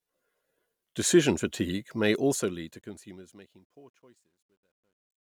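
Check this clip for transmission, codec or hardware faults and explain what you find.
There is one fault, in the fade-out. Truncation distortion on the fade runs from 2.10 s to 5.24 s. The level stage drops low-order bits without dither, which points to only about 12 bits kept. The dying speech turns gritty, worst between 3.65 s and 5.24 s, as the fading waveform collapses into coarse steps.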